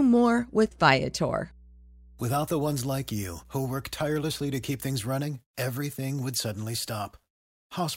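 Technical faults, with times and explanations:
0.0–5.09 s, mains hum: a steady 60 Hz drone about 25 dB under the speech, power line leaking in, which stops just before "everything would suddenly".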